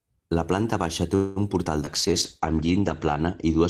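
Right after "planta baixa té", from 1.15 to 1.39 s, there's what sounds like a call audio freeze: the last sound smears on for about 205 ms, likely from packets stalling and the jitter buffer running dry, then resumes with nothing lost. Short concealed packet loss follows at 1.64–1.68 s, after "planta baixa té un", and again at 1.85–1.90 s. Each time about 40 ms went missing and about 13 ms got patched over, giving a quick smear. From 1.85 s to the end there's a call bitrate drop from 32 to 12 kbps, with bandwidth falling from 20 kHz to 8 kHz, so the speech turns muffled and a bit watery. Between 2.53 and 2.82 s a jitter buffer slow-down stretches the audio by 45 ms, to 88% speed at the same pitch, so things sound slightly drawn out.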